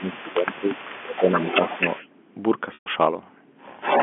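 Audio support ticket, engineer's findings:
Speech suppressed in double talk, 0.0–1.27 s: level dips up to about 10 dB across roughly a second total. Likely echo canceller clamping the near talker along with the echo. Waveform envelope shows notched dips.

Echo leak, 0.0–2.07 s: delayed copy 296 ms behind, about 10 dB down. Again 3.8 s to end: 249 ms delay, near equal level. Likely loudspeaker residue. Spectrogram shows harmonic patterns duplicated, time-shifted.

Packet loss with pitch repetition at 0.32 s (20 ms, fits one packet) and 2.74–2.86 s (120 ms, fits six). Concealment repeats the last pitch period, giving a held buzz. Spectrogram shows frozen harmonics, fading on the longer gap.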